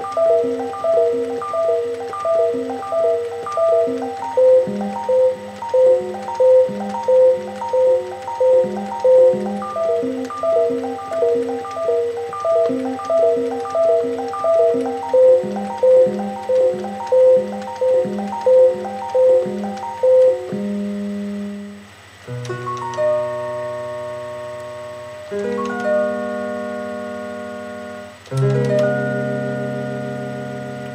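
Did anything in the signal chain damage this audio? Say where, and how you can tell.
No, the signal chain shows no audible damage at any stage, from capture through to playback.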